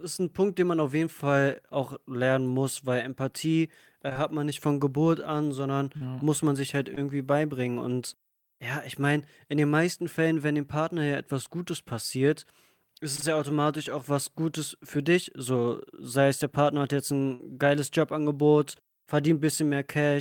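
Short concealed packet loss occurs at 4.09 and 4.13 s (back to back), 5.97, 6.95, 11.45, 13.16 and 13.20 s: each 20–40 ms hole is bridged by extending the preceding speech, leaving a brief smear or wobble. A burst of packet loss at 17.34–17.55 s drops about 60 ms; the decoder stretches and fades the last sound into a buzz or hiss before the speech resumes further on.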